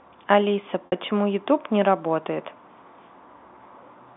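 At 0.86 s the speech breaks up for about 60 ms, ending at 0.92 s, a gap that fits three lost 20 ms packets. The receiver bridges it with packet loss and pitch repetition, looping the last pitch period, so the sound holds briefly on a buzzy, steady tone that fades out before the speech resumes through a short cross-fade. The G.711 telephone coding at 64 kbps keeps the band at 200 Hz to 3.6 kHz throughout.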